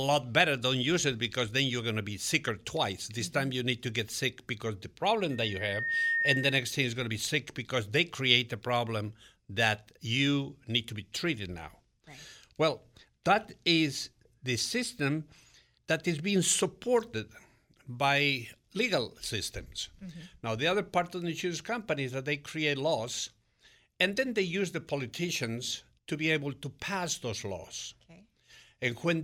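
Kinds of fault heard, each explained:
Loudspeaker feedback squeal: A microphone is hearing its own loudspeaker, and the loop gain passes one at a single pitch. Here a 1.8 kHz tone swells up in under a second around 5.3 s. It peaks about 5 dB above the speech, then stops at 6.8 s.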